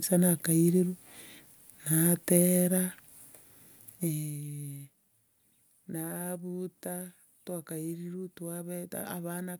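No technical faults can be heard anywhere in this speech recording.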